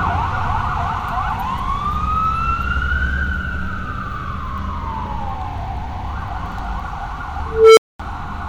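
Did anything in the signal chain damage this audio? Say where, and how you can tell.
Yes, an unstable filter in the processing stage. At 7.46 s a tone near 400 Hz swells for 0.31 s, clips, then overflows into 0.22 s of silence.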